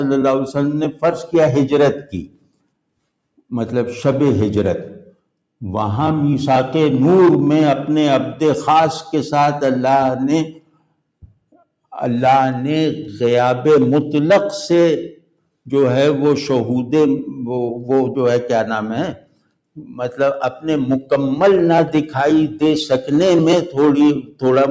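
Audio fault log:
Throughout: noise suppressor applied to music or sounds. A suppressor built for speech stays active over the whole clip and keeps treating steady, sustained parts of the sound as background noise. Its gain rises and falls as it decides what to keep, with swings of around 10 dB, so onsets come through while held material and decaying tails are pulled down. The result pumps and thins. The call's microphone path cuts everything above 8 kHz, as expected.
1.95–2.67 s, 10.46–11.02 s, 11.22–11.64 s, 15.1–15.48 s, 19.14–19.52 s, 19.75–20.2 s, 24.18–24.43 s: sound cut by the noise suppressor. In each span the suppressor judges the sound to be noise and turns it down more than its surroundings. The deepest drops are about 18–19 dB, except about 13 dB at 19.75 s. Each span lasts roughly a quarter to three quarters of a second, so sustained or fading sound sinks or has its decay cut off early.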